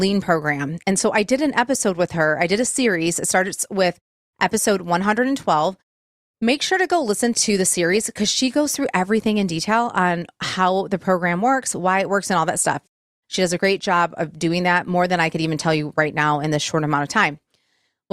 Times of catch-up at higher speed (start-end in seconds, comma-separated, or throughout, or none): none